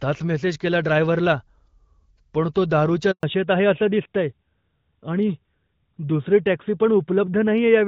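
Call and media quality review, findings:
Handover gap, 3.11 to 3.23 s, right after "पण तो दारूच्या": call moved between networks, no speech frames delivered during the switch. Sound cuts out within milliseconds, 120 ms of silence, anything said in that span lost.

Fallback to narrowband, 3.23 s to end: codec dropped from AMR-WB HD Voice (light coding damage, consistent with 12.65 kbit/s) to AMR-NB, consistent with 12.2 kbit/s. Nothing above 4 kHz from that point; speech duller, more muffled, rougher.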